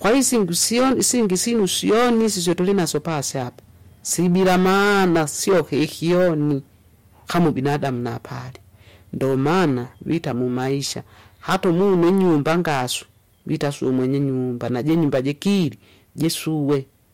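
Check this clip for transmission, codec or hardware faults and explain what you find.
Hard clipping runs through the whole speech clip. The signal was driven about 14 dB past what a stage could pass, so roughly a tenth of the samples had their peaks cut flat. Those flat tops add high harmonics, heard as distortion on the loud passages.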